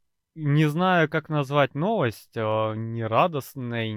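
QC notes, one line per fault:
0.12–3.92 s, clock slip clicks: faint ticks about every 0.1 s, one sample dropped or repeated, likely from free-running device clocks about 200 ppm apart.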